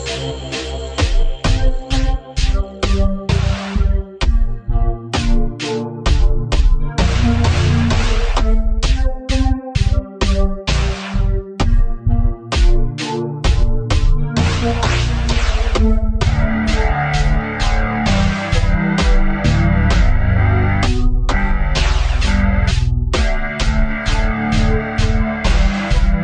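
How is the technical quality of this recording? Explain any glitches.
The technical quality is compromised by one fault that runs the whole length: a wrong sample rate. From start to finish everything plays at half speed and exactly an octave low, a drop of 12 semitones, which fits 48 kHz material being clocked out at 24 kHz with no conversion. Because pitch and tempo fall together by the same factor, the sound is sluggish and deep. That linked shift sets it apart from a time-stretch slowdown, which would keep pitch intact.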